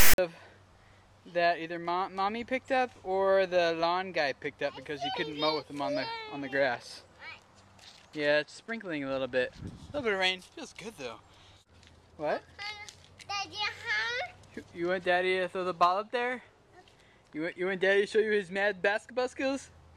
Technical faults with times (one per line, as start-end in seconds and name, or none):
0.00-0.18 file tags played as audio